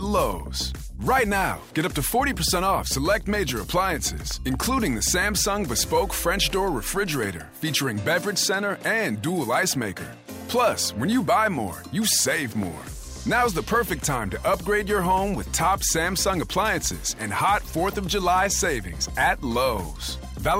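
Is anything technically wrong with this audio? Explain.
Yes, there are loud pops. Two occur between 4.31 and 4.56 s, and one occurs at 12.63 to 12.65 s, roughly 5 and 10 dB above the sound. Each is a sharp pulse over continuing audio, likely a voltage step from a plug, switch, static or driver glitch.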